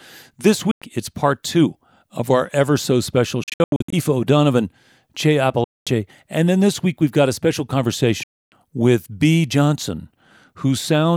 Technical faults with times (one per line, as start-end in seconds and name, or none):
0.71-0.82 Bluetooth dropout
3.43-3.93 Bluetooth dropout
5.64-5.87 Bluetooth dropout
8.23-8.52 Bluetooth dropout